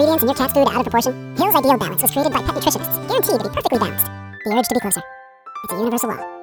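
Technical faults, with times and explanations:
Throughout: audio read two samples at a time (double speed). The reader took each pair of samples as one frame, as though the stream held two channels or samples twice as wide, so the sound runs at 2x speed and a full octave (12 semitones) higher.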